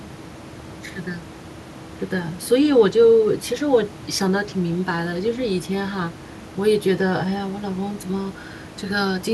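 A speech recording with no technical faults. Background noise from the room sits about 16 dB below the speech and belongs to the recording itself.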